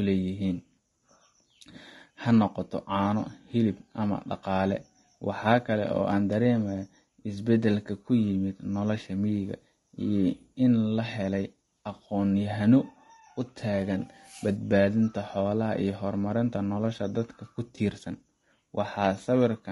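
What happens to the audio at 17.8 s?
From 17.75 to 17.78 s there is an AAC frame loss with concealment: one frame, about 20 ms of audio, never arrived, and the decoder filled the gap by reusing the last good spectrum with altered phase. It is heard as a brief smeared, noisy blip in the speech. On a spectrogram the harmonics blur into a short vertical smudge with noise filling between them, and the waveform shows a small patch whose shape no longer follows the surrounding cycles.

Around that moment, as across the whole clip, the speech sounds rough and grainy, with noise between the harmonics and a thin, synthetic-sounding top band. That points to low-delay AAC compression, likely AAC-ELD at a low rate of around 32 kbps, whose short frames resolve pitch harmonics poorly. On a spectrogram the harmonic lines look fuzzy with speckled fill between them, and the upper band appears patchy and smoothed.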